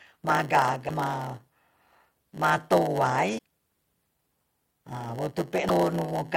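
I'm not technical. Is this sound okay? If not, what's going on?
No. A steady 100 Hz buzz runs throughout, and the speech is slowed to about 0.92 speed with its timbre unchanged: a block size mismatch (padded), where each block ends in inserted silence.

At 0.88, 3.37 and 5.68 s there is a brief skip and glitch of about 25 ms, likely a broken MP3 bit reservoir after data was lost.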